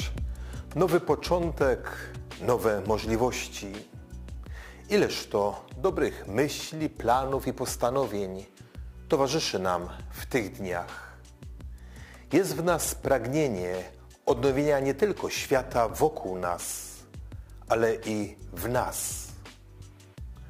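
Throughout, crude rate conversion by dropping samples, fitting 48 to 44.1 kHz, adds gritty inharmonic fizz roughly 25 dB down; spectrograms show faint stray lines shadowing strong partials.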